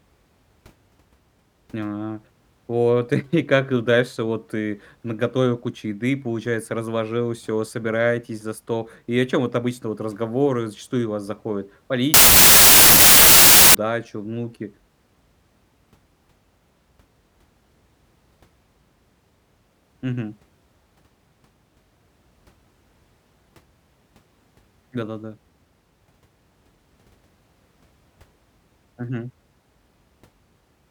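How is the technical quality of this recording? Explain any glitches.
Sample-width fault from 12.14 s to 13.75 s, just after "зачастую у вас заходит". For this stretch the speech turns into loud, harsh noise with the original speech faintly audible underneath, slowed to about 0.75 speed and lowered in pitch. The pattern fits a wrong sample width: data stored as 32-bit integers being read as packed 24-bit integers. Each read sample then takes three bytes instead of four, so most values mix bytes from neighbouring samples and become noise. Only occasional values line up with the real high-order bits, which is why the speech still bleeds through. Cutting each sample from four bytes to three yields a third more samples, which explains the slower speed and deeper pitch.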